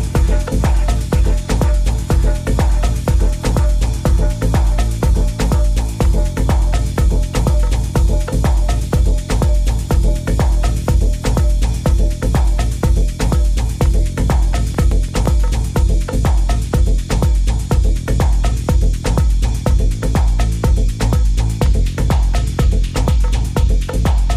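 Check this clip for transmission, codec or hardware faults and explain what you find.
One fault appears: CD scratch ticks, from 14.40 to 15.43 s. A surface blemish corrupted more data than error correction could rebuild on each disc rotation, so the player concealed the gaps, giving seven short ticks, the longest a few milliseconds, at about seven per second.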